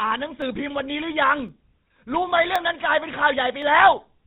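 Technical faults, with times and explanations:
throughout, GSM full-rate codec: The speech has a plainly audible buzzy, gravelly roughness, and nothing above 3.9 kHz. This is the 13 kbps GSM full-rate coder, which models the vocal tract and drives it with a sparse, regularly spaced pulse excitation. That coarse excitation causes the grit. A plain low-pass filter would dull the top end and leave the voicing smooth, and modern low-bitrate codecs tend to warble or swirl rather than rasp.
0.42 to 3.62 s, clock drift buffer slips: Four or so short clicks fall at a steady interval of 1.07 s, while sound is present. The likely cause is two devices running on separate clocks that disagree by a few hundred parts per million, so the buffer between them fills or drains until a small block of about 15 samples is dropped or repeated. The strict regular spacing separates these from random dropouts or packet loss.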